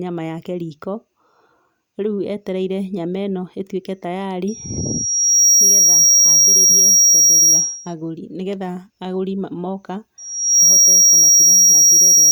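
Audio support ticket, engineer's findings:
Piercing single tone near 5.7 kHz swelling out of the speech, 4.47 to 7.94 s, rising over roughly a second; again 10.18 s to clip end, rising in about half a second. Peaks around 15 dB above the speech. Loudspeaker feedback squeal: mic picking up its own monitor/PA output, loop gain above unity at 5.7 kHz, so that frequency regenerates until limited. Second onset faster, loop still hot. Check mic-to-speaker placement, gain, notch at 5.7 kHz.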